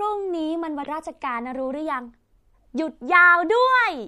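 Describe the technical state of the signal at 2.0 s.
At 2.0 s, as throughout the clip, likely MP3 compression at a starved bitrate, fitting around 64 kbps, drops weak frequency lines, leaving the speech watery with smeared, chirpy sibilants.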